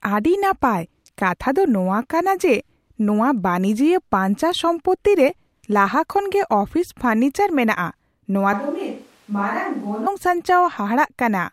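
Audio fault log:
8.53 to 10.07 s, switch to a distant microphone: Right after "ᱯᱷᱚᱨᱱᱤᱪᱟᱨ ᱢᱮᱱᱟᱜ ᱟ ᱱᱚᱶᱟ", the speech turns hollow and roomy at once. It drops by about 5 dB and loses bass. Room noise rises to roughly 30 dB below the speech. The close microphone likely dropped out, leaving a farther one. The return is just as abrupt.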